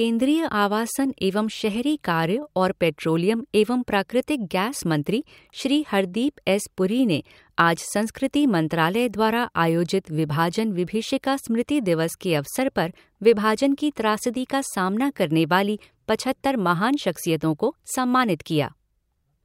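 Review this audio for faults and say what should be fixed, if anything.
No faults found in the speech recording, so nothing needs fixing.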